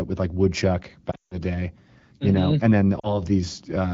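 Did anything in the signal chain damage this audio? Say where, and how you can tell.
Yes: speech smears, fades to near-silence and returns rough at 1.11–1.38 s, with a shorter dip at 2.99–3.22 s, pointing to lost AMR speech frames on the radio network, concealed with decaying gain.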